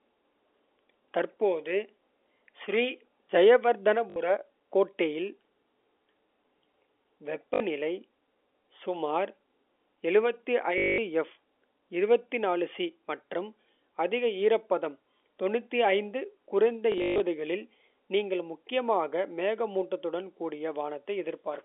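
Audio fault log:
4.10 to 4.16 s, 7.54 to 7.60 s, 10.78 to 10.98 s, 16.92 to 17.20 s: packet loss with last packet repeated. The first two gaps each last 60 ms. The third is 200 ms. The last is 200 ms scattered over 280 ms, with a longest run of 140 ms, ending just before "களில் நீங்கள் முக்கியமாக மேகமூட்டத்துடன்". In each gap the receiver replays the final good chunk of audio. The repetition points to 20 ms packets, so longer runs buzz robotically at 50 Hz. On a waveform this shows as identical repeated 20 ms blocks with steps at the seams. A spectrogram shows a frozen spectrum, vertical click lines, and a 50 Hz comb, all confined below the telephone band's 3.5 kHz ceiling.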